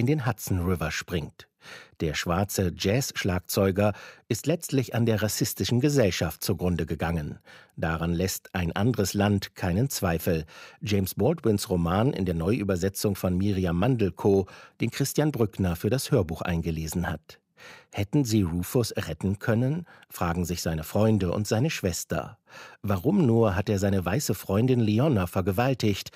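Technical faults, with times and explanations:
No technical faults detected.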